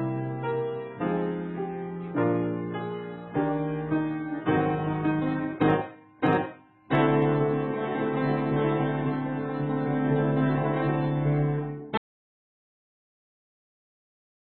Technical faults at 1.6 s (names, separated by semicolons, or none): none